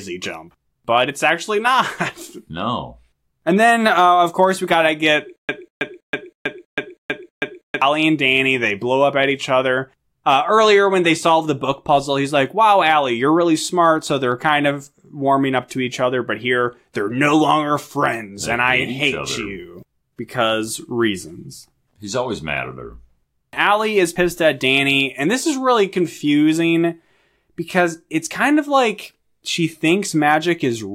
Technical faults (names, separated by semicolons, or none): stutter with silent gaps